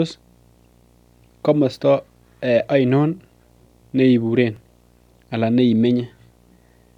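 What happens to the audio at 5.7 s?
At 5.7 s the speech is accompanied by video or display buzz, present across the whole clip rather than starting there. Interference from a screen or video cable is leaking into the audio path, coupling in energy at the picture's 60 Hz field rate. It is heard as a low, steady buzz with a hash of harmonics above it, sitting faintly beneath the speech at around 40 dB below it.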